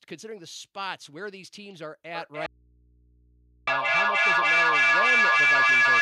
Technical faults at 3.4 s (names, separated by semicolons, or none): feedback howl; audio dropout to a faint residue